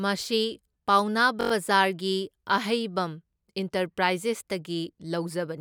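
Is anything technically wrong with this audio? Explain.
Yes. From 1.41 to 1.52 s there is a system hang loop: the driver stalled while the hardware kept replaying its ring buffer, so a 21.3 ms slice, which fits a 1024-sample buffer, repeats five times, producing a brief buzz at about 47 Hz. Little or no audio is lost.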